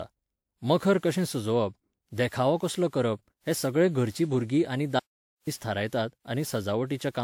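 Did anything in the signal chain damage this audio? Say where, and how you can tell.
Yes. Throughout the speech the sound is swirly, smeared and hollow, with blurred consonant attacks, though content extends to about 20.1 kHz. This is generation loss at the codec stage, likely from about seven repeated WMA decode and re-encode passes, consistent with a 128 kbit/s chain, each adding fresh quantisation noise.

From 5.00 to 5.47 s, right after "घरचीं भुरगीं आनी", the audio drops to silence for about 0.47 s, with no room tone, and then resumes mid-flow. This audio dropout to silence points to the capture input failing while the recorder kept writing silence.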